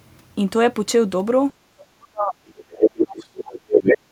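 From 1.75 to 2.38 s the talker's speech sinks hard, dropping by something like 35 dB at its deepest over roughly 0.7 s. That's speech suppressed in double talk. What likely happened is that both ends spoke at once, and the echo canceller couldn't tell the near talker from the loudspeaker echo, so it pulled the whole microphone signal down.

At 2.57 s a second voice starts coming through and carries on to 3.19 s, sitting at about the same loudness as the talker. That's the other side's voice leaking through. The far end plays out of the device's speaker and gets back into the mic, likely because the canceller didn't fully remove it.

Overlapping that, from 2.69 to 3.73 s, the talker is suppressed again for about a second, down around 30 dB at the worst point. It sounds dipped while the far side is active. Then from 3.71 to 3.98 s the leaked far-end voice comes back, now a little louder than the talker.

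Right at the end, from 4.01 s, the background sound drops by about 9 dB for the last tenth of a second. That's the background gated by the echo canceller, where it clamps the mic hard while the loudspeaker plays and the room tone briefly ducks.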